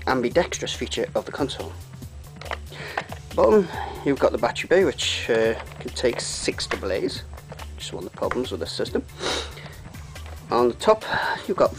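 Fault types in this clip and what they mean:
No faults detected in this clip.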